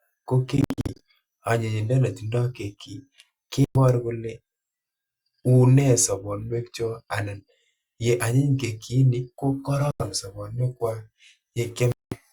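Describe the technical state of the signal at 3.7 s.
At 3.7 s the speech is interrupted by a Bluetooth dropout running from about 3.65 to 3.78 s. The signal cuts to silence and returns partway on, as though it had kept playing in the gap, most likely because audio packets missed their delivery window to the headphones and were discarded. The hole fits roughly seven lost codec frames. On a waveform it shows as a flat line; a spectrogram shows a clean vertical blank strip.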